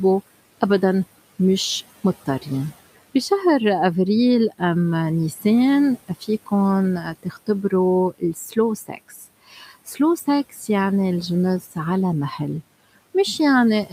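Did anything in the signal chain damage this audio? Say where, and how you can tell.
Yes. Speech is cut by the noise suppressor in call processing at 5.36–5.45, 6.08–6.52, 7.02–7.72, 8.14–9.99 and 11.61–11.76 s. The suppressor mistook quiet speech for noise, so it sounds swallowed and drops by about 8 to 17 dB.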